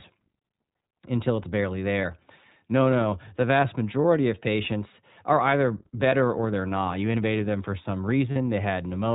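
The whole recording has been through the iLBC codec, and it's plainly audible. Everything above 4 kHz is gone, so the speech is narrowband and a bit rough and synthetic. That's the price of coding each frame's excitation on its own instead of borrowing from the previous one. The texture fits the 15.2 kbps mode with 20 ms frames.

There are also four spots of lost iLBC frames. The first is at 2.02–2.05 s, right after "until it's barely". The second is at 4.02–4.05 s, just before "of patients are either". The third is at 6.10–6.14 s, between "of patients are either" and "or they're not". The last is at 8.32–8.37 s. In each gap the decoder fills in by repeating the last pitch cycle blended with noise, so you hear a brief held, slightly buzzy vowel. The first three sound like one missing frame each. The last one is longer and fits two frames in a row. The voice snaps back almost immediately after every gap.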